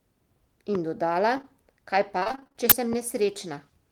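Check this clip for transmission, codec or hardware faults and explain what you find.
Several faults are present in this speech clip: two pops, a pair of concealed packet losses, a stretch of repeated packet loss, and one burst of uninitialised buffer noise.

At 0.75 to 0.77 s and again at 2.93 to 2.95 s there is a single sharp loud pop, each one around ten decibels above the speech, with the talking continuing underneath. Each is likely a sudden electrical step or pulse, such as from a switch, static or a driver glitch, entering the signal path, where the following circuits shape it into a brief thump.

From 1.37 to 1.45 s the speech briefly smears and wobbles. This is short concealed packet loss: two consecutive packets of about 20 ms each failed to arrive in time, back to back at 1.37 and 1.41 s. The receiver covered each gap by extending the preceding sound and then blending back into the real audio, leaving a quick blur rather than silence.

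Between 2.19 and 2.56 s the speech turns choppy and robotic, the sound of repeated packet loss. Nine separate gaps fall in this span, the longest 32 ms. Roughly half of the stretch is synthetic fill, because each hole was patched by continuing the last sound just before the next loss arrived, so fragments of speech drop out.

At 2.70 to 2.72 s a short loud crack cuts in. This is an uninitialised buffer: a block of about 21 ms was sent to playback before any audio had been written into it, so stale memory contents were played as samples. The length fits a 1024-sample buffer.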